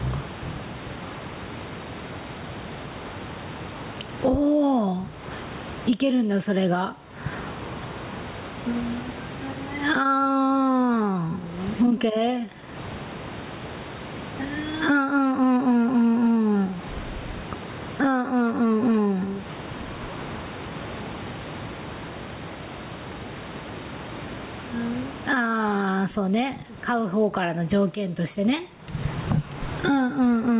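Throughout the speech, the gain swings by around 25 dB. This is gain pumping, likely a fast limiter taming far too much microphone gain.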